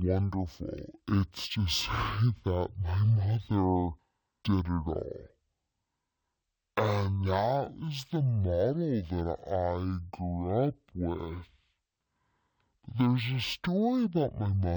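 Speech running at half speed and a full octave low from start to finish points to stereo read as mono: interleaved left and right samples play back as one channel, doubling the length. A spectrogram shows compressed harmonics plus a faint mirrored copy in the upper half.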